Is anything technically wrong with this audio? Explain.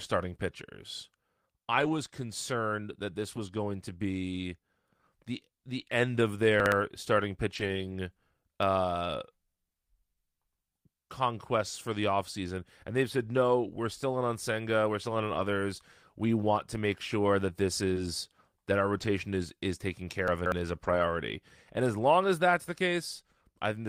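Yes, this speech recording has three kinds of transmission fault.

Lost packet rebuilt from error correction occurs at 1.71 to 1.93 s, 3.31 to 3.37 s, 7.55 to 7.93 s, 15.33 to 15.39 s, at 17.96 s, at 18.98 to 19.08 s (after "that our", before "is is taken") and at 20.84 to 21.02 s. Each missing packet was replaced by a low-bitrate duplicate carried in the following packet, which is Opus in-band forward error correction. Nothing drops out, but those stretches turn rougher and grainier, and the longest rebuilt run, near 7.6 s, lasts about 200 ms.

Chunks out of order appear at 6.6 to 6.72 s and at 20.28 to 20.52 s (after "is is taken", before "is a"). A 60 ms block of audio plays late, one block behind at 6.6 s and three behind at 20.3 s, so the sequence is shuffled although nothing is lost. There are hard joins where the block is cut out and reinserted, and the passage sounds briefly jumbled.

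Short concealed packet loss lands at 17.93 to 17.98 s, just after "make sure that this". Roughly 20 ms never arrived in time, and the receiver filled the gap by extending the preceding sound for about 22 ms before blending back into the real signal. It comes across as a quick smear or wobble, and it overlaps a one-packet error-correction repair at 17.96 s.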